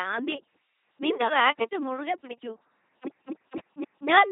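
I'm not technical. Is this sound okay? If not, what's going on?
No. Throughout, the speech passes through an LPC-10 vocoder, which rebuilds each moment as pure buzz or pure hiss, giving a heavy, muffled, robotic sound.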